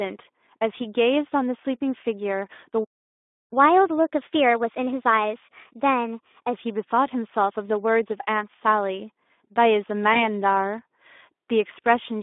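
Throughout the clip the speech carries the marks of the Speex codec at a low setting. With so few bits left for the excitation signal, voiced sounds take on a hoarse, grainy texture, which fits a rate around 11 kbps. The audio occupies only about 250 Hz to 3.6 kHz, so there is a thin lower end and no air above the telephone band.

From 2.84 s to 3.53 s the output drops to silence in mid-flow for about 0.67 s. This is a playback stall, most likely the player's buffer running dry or its output thread being held up. It then resumes once data is available again.

Directly after the gap, from 3.53 s to 6.53 s, there is catch-up at higher speed. The player resamples its accumulated backlog to run at 1.15 times normal rate, so delivery sounds hurried and the pitch sits about two semitones high. This is a chipmunk-like lift rather than a change in the talker. At 6.53 s speed and pitch drop back to normal, part of the lost time having been recovered.

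Between 10.13 s and 10.22 s there is VoIP packet loss concealed by the speech codec. The missing stretch fits a single 20 ms frame. The decoder fills it by extending its last pitch period and spectral shape at falling gain, which produces a brief stretched, fading sound. Because each decoded frame depends on the state left by the previous one, the audio stays weak and distorted for several tens of milliseconds after real packets resume, before it settles.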